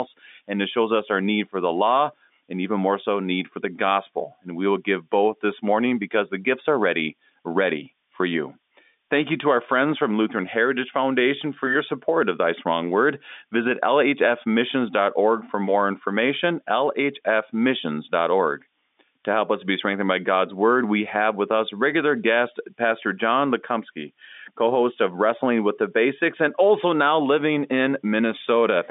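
A thin, high whistle runs through the whole speech clip, wandering between about 6.0 and 6.1 kHz and sitting roughly 20 dB below the voice. It is a switching supply whistle, a power supply's converter running in an audible burst mode or beating with another one, and it lies well above the telephone band that the G.711 line carries.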